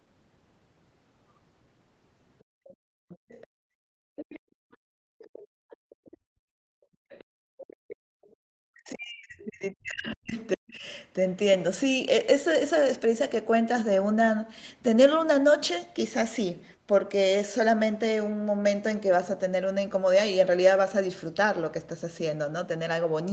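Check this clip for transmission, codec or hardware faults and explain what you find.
Three echo-control faults sit in the first half of the clip, all tied to the far end playing over the talker's loudspeaker. The speech passes through call-style microphone processing, with nothing above 8 kHz.

Background gated by the echo canceller, 2.44 to 8.42 s: while the loudspeaker is active, the canceller clamps the microphone hard, pulling the room sound down by as much as about 38 dB. The ambience dips and drops out in stretches totalling about four seconds across that window, then returns each time the canceller releases.

Other side's voice leaking through, at 2.64 to 3.47 s, 4.16 to 6.17 s and 7.09 to 8.29 s: a second, fainter voice is audible under the talker, some 20 to 25 dB down. The likely cause is incomplete echo cancellation, so part of the far-end voice coming from the loudspeaker is picked up by the microphone and sent back rather than subtracted.

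Speech suppressed in double talk, 8.7 to 10.85 s: the talker's own voice sinks, by around 40 dB at its deepest, in pieces adding up to about two seconds. With both sides speaking at once, the canceller likely could not tell the near-end talker from the loudspeaker echo and attenuated everything it heard, so the wanted speech is cut along with the echo.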